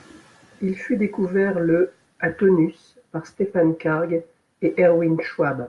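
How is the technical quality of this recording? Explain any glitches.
Nothing here trips any alarms; there are no glitches to point to in this bit of speech.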